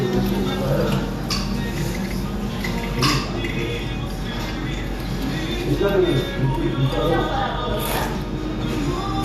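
No technical fault can be heard anywhere in the recording; the signal stays continuous and intact throughout.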